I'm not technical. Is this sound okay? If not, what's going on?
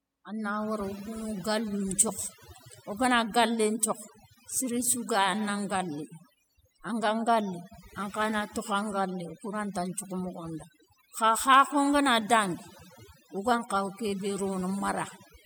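No. The whole recording has overdone noise removal. A cleanup tool was set too strong. It strips out quiet parts of the voice along with the noise. The background drops and breaks up into twinkling, warbling specks.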